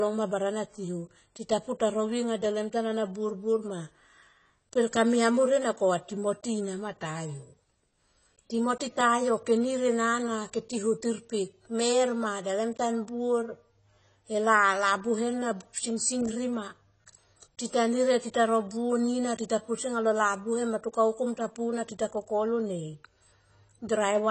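From start to finish the speech sounds dull and smeared, with nothing above about 8.3 kHz and a fizzy, warbling edge on sibilants and held vowels. This is likely AAC compression, with AAC-LC squeezed hard enough that its hearing model discards the top band and quantises the remaining frequency lines coarsely, leaving audible holes and swirl. The damage is plainly audible and fits a low bitrate of around 24 kbps.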